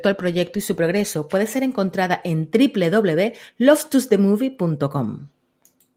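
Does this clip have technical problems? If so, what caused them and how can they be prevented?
No, no technical problems detected.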